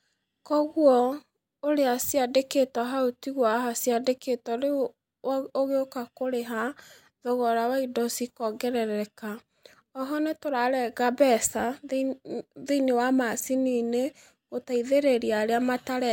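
Nothing goes wrong at any point in this speech recording, so there are no technical faults to walk through.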